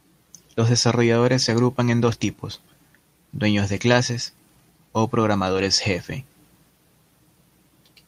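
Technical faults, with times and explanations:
2.05–2.15 s and 5.53–5.63 s, lost packet rebuilt from error correction: packets went missing in transit just after "desarrolladores se agrupan en" and again after "dueños de clases o". Each following packet carried a low-bitrate backup copy, so the decoder rebuilt about 60 ms each time, which fits three 20 ms frames, and left no gap. Both stretches sound rougher and grainier for that moment, but with no dropout.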